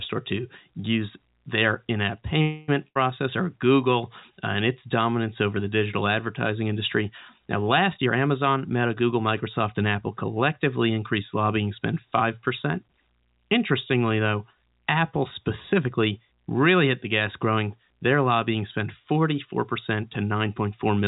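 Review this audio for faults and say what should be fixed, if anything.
Right after "use their in app", from 2.42 to 2.70 s, the last sound is stretched into a buzz or hiss that fades for about 260 ms, and then the speech carries on exactly where it stopped with nothing skipped. That is a call audio freeze, likely caused by packets stalling in transit so the jitter buffer ran dry and the receiver padded the wait with a decaying continuation, inserting a gap rather than losing anything. A deeper adaptive jitter buffer, or a more stable network route, would ride out the stall.

Shortly after, from 2.88 to 2.97 s, a brief fill of about 74 ms replaces the speech, and when the sound returns roughly 80 ms of it is gone. This is a burst of packet loss: several consecutive packets were dropped or arrived too late, and the concealment stretched and faded the last sound before jumping ahead past the missing stretch. 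Forward error correction or redundant packet transmission would let the receiver rebuild the lost audio.

From 7.97 to 9.96 s, leading into "collectively increased lobbying spend", the speech sounds rushed, running at about 112% of normal speed while the pitch stays unchanged. This is a jitter buffer speed-up: after delayed packets arrived in a cluster, the buffer held too much audio and trimmed it back by cutting out short pitch-period slices repeatedly, around 0.3 s in total. Smoother packet delivery or a slower, gentler buffer-shrink policy would avoid the audible hurry.

Throughout, nothing is heard above 4 kHz, which matches a narrowband G.711 call path.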